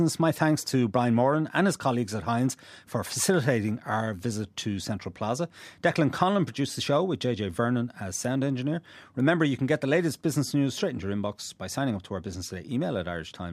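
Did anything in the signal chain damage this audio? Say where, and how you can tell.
No, nothing in the signal chain damaged this audio.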